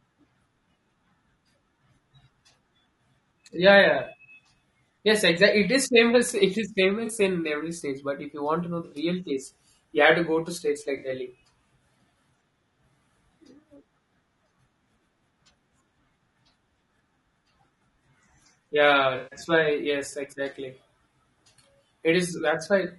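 Across the whole clip the speech sounds rough and grainy, with noise filling the gaps between harmonics and a thin, synthetic top band. This is likely low-delay AAC compression (AAC-ELD), with short frames and damage that fits a bitrate around 32 kbps.

AAC frame loss with concealment occurs at 7.05 to 7.11 s, 8.85 to 8.95 s and 10.97 to 11.07 s, with gaps of 40 to 60 ms. The decoder patches each gap from the previous spectrum, leaving a brief smeared, phasey blur. The longest loss, 140 ms at 19.17 to 19.39 s, is a noticeably longer noisy smear.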